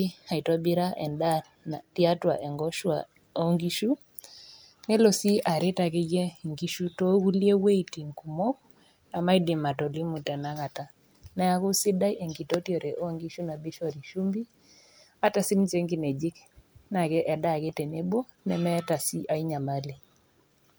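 No technical faults can be heard anywhere in the recording; the signal stays steady and intact throughout.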